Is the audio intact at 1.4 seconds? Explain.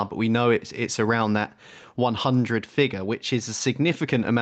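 No, at 1.4 seconds the speech is caught up in gain pumping, which runs through the whole clip rather than just that moment. The level swings by around 5 dB, so everything sounds squashed. That's likely a mic gain set way too high, with a fast limiter or compressor clamping down on every loud peak.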